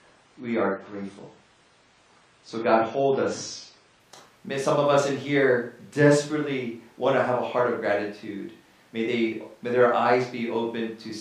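From 0.0 s to 4.0 s the speech plays from an adaptive stream starting at a low bitrate: the player begins on a cheap version of the stream so playback starts quickly, then switches once it has gauged the connection. Nothing is present above 10 kHz, and codec artefacts are more prominent, which fits AAC-LC at around 24 kbit/s. At 4.0 s the treble returns abruptly and the artefacts ease, with no gap, consistent with a step up to about 96 kbit/s.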